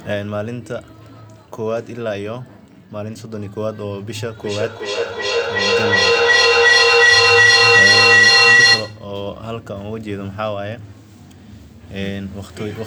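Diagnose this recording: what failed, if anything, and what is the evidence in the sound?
An acoustic loop formed between two devices on the same call in one room: the loudspeaker's output re-entered the microphone with more gain than the call processing removed, so each round trip came back louder. The result is a feedback howl from 4.37 s to 9.14 s, narrowing to a tone near 2 kHz, with the loop's round-trip delay at roughly 400 ms. It peaks about 14 dB above the speech before the loop breaks.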